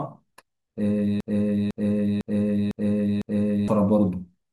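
At 1.20 s the speech catches in a broken-record loop: a 0.50 s fragment plays five times back to back, identical each pass, until 3.68 s. The player or stream likely stalled and kept resending what it held, so the audio for that stretch is lost.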